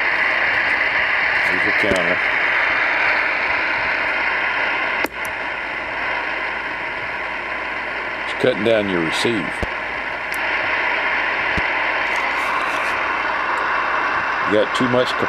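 Sharp, single pops cut through at 1.91 to 1.94 s, 9.63 to 9.65 s and 11.58 to 11.60 s, each roughly 15 dB above the surrounding sound, which carries on beneath them. These loud pops are likely brief voltage spikes entering the signal chain.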